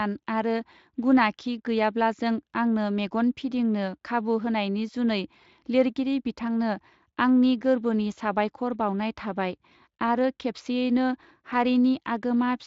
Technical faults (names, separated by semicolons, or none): none